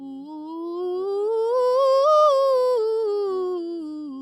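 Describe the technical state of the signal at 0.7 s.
A noise suppressor made for speech, applied to this music throughout, treats sustains as noise and dips them a few decibels. The waveform shows full attacks with shrinking, pumping tails.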